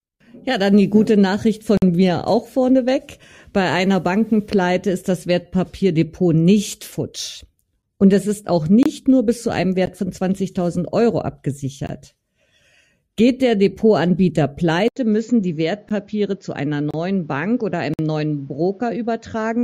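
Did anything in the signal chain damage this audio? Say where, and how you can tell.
Yes. Gap between stream segments, at the network/streaming stage: hard-edged silences at 1.77 s (48 ms, before "mir auch vorneweg"), 7.82 s (after "nicht futsch"), 8.83 s (26 ms, between "es ist auch" and "nur bis zu einem"), 9.86, 11.87, 15.89, 16.91 (30 ms) and 17.94 s (52 ms). They fall on one-second segment boundaries and the sound resumes intact, so it is padding rather than a dropout.

Input switched to a poorer device, at the capture stage: at 14.88 s an 80 ms silence precedes a duller sound with nothing above 7.2 kHz, about 5 dB quieter, and a new noise floor about 40 dB down. The likely cause is a change of microphone or headset profile. A codec cut-off would not bring new noise or a level step.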